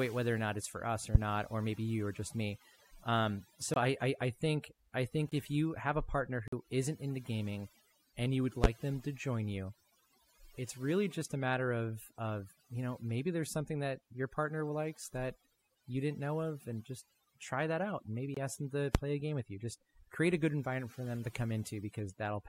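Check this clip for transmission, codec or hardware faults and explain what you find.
Three faults show up in this speech clip: overdone noise removal across the whole recording, three loud pops, and four blocks of digital silence.

Overdone noise removal runs throughout. The background falls to near silence scattered with twinkling specks. A noise reduction stage was set too aggressively. It pulled individual frequency bands far down or off whenever they came close to its noise estimate. The quieter parts of the voice sat near that threshold, so they were stripped away along with the noise, and the leftover flickering bands produce the specks.

Loud pops occur at 1.15 s, 8.64 s and 18.95 s. The last one falls between "ask them to" and "play a game with". Each is a single sharp pop, roughly 30 ms long and far louder than the speech, which carries on underneath. The likely cause is a sudden voltage step or pulse, from a plug, a switch, static or a driver glitch, entering the signal. 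The circuitry after it then shaped that pulse into a brief burst.

Blocks of digital silence appear at 3.74 s (just before "I I I think"), 5.29 s, 6.48 s and 18.34 s. The last sits between "try that out and" and "ask them to play". Each one is a short hole, because the audio drops to silence and returns with no fade. Most gaps last about 23 ms, and the one at 6.48 s lasts about 46 ms. Those lengths fit whole 1024- and 2048-sample buffers at 44.1 kHz being left unfilled in time and output as zeros.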